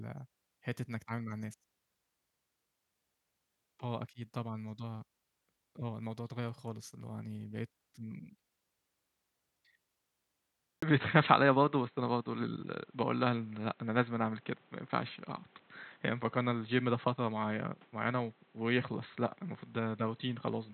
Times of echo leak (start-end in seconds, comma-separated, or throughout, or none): none